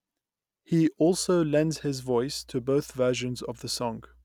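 From 1.04 s to the end, a steady low 60 Hz drone sits well beneath the speech: mains hum, power-line interference leaking in through a ground loop or nearby transformer.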